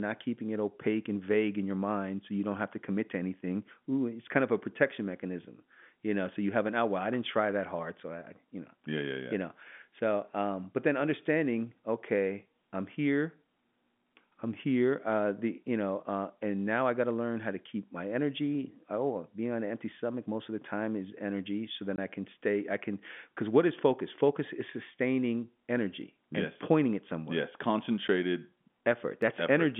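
At 21.96 to 21.98 s, just before "I can stay I", there is packet loss filled with silence. About 20 ms of the speech vanishes into a hard gap. That fits two lost 10 ms packets that the receiver replaced with nothing. Both edges of the hole are hard. At 28.08 s a second gap of 10 ms appears, matching a single lost packet. It is shorter, but it cuts in and out just as sharply.

At 26.02 s, between "is sustaining" and "and yes pointing it", a single sharp click sounds. No speech goes missing. The waveform simply jumps ahead. The likely cause is dropped samples, only a handful of them, a fraction of a millisecond. At 29.22 s the same kind of tiny click returns. Through both clicks and both gaps, the narrow telephone band of the G.711 A-law line stays audible, roughly 150 Hz to 3.5 kHz.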